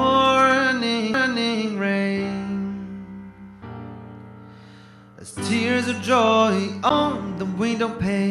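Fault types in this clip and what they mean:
CD skip: the laser has been knocked or thrown by a flaw onto a different turn of the disc's spiral, so playback briefly goes silent and resumes at another point in the recording. It happens twice here, at 1.14 s and at 6.9 s, each with only a tiny mute of a few to about ten milliseconds, heard as a tick followed by an abrupt jump in the sound. Unlike a plain dropout, the audio does not pick up where it left off; it lands somewhere else.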